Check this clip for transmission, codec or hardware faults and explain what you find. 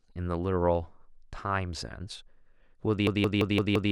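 One fault is present, a system hang loop from 3.07 s to 3.91 s. A frozen driver left the hardware replaying a 171 ms buffer (an 8192-sample buffer fits) five times at 5.9 Hz, a stutter that costs about a second of speech. The waveform and spectrogram show identical repeating blocks.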